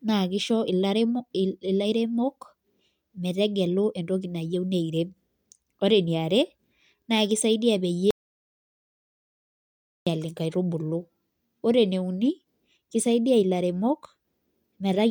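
At 8.11 s, right after "naa kisaidia", the speech cuts off abruptly and the clip falls into dead silence, with no room tone or background hiss, until the sound returns mid-flow at 10.07 s. This is an audio dropout to silence lasting about 1.96 s, and whatever was said in that span is lost. The likely cause is a momentary loss of the input signal while the recorder kept writing silence.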